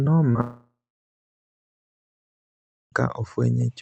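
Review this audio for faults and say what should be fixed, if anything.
A brief smear breaks the speech between 0.31 and 0.37 s, where the sound wobbles for a moment instead of carrying on cleanly. This is short concealed packet loss: about 40 ms of the stream arrived too late or not at all, and the decoder filled roughly 34 ms of it by extending the preceding sound, then crossfaded back into real audio. A short consonant may have been swallowed. A larger jitter buffer or forward error correction would prevent it.

From 0.41 s the sound trails off as a fading buzz and then goes quiet, with about 2.15 s of silence before audio resumes at 2.94 s and continues without the missing section. This is most likely a long network dropout. For about 2.52 s nothing reached the receiver, so it stretched the last sound until that decayed and then played only silence. The content in that gap is lost. 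A more stable connection with redundancy or retransmission would prevent it. The call codec limits the band to roughly 8 kHz throughout.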